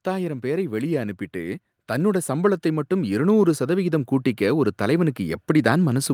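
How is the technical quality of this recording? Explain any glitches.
The recording has one fault, automatic gain rising, and it lasts nearly the whole clip, from 0.05 s to the end. The automatic gain control judged the incoming speech too quiet and kept raising its gain, so the voice and the background noise swell together. Compressor pumping would rise and fall with each phrase. Here the noise floor climbs with the voice in one slow, steady rise.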